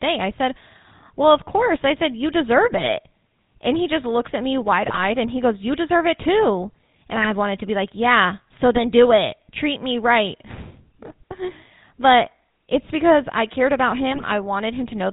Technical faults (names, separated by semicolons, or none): GSM full-rate codec; GSM bit errors